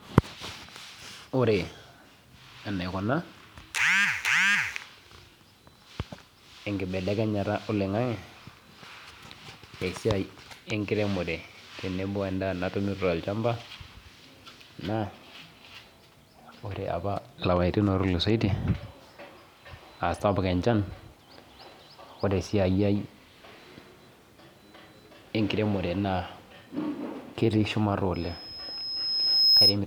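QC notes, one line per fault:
28.14–29.78 s, loudspeaker feedback squeal: a pure 5.1 kHz tone swells over about a second and a half to roughly 10 dB above the speech. The microphone picks up its own loudspeaker, and at that frequency loop gain exceeded one, so the tone fed itself.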